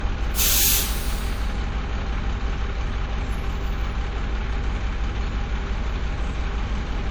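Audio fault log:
Throughout: low-bitrate audio saved at a high bitrate. The top end stops around 20.2 kHz, but the artefacts of a much lower-bitrate encode are still there. It's likely an early WMA pass near 64 kbit/s, later re-saved as roughly 256 kbit/s MP3, which can't restore anything lost.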